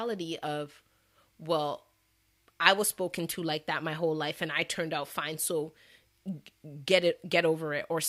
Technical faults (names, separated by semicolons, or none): drift correction step